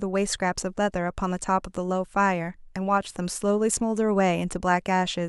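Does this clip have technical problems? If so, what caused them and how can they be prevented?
No, nothing in this speech clip stood out as a technical problem on listening, so there is no cause to trace or prevent.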